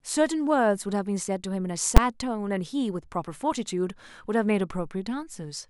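At 1.97 s the speech is hit by a single loud bang: invalid numbers at full scale, a block of about 10 ms held flat at one extreme value after a calculation produced infinite or invalid values.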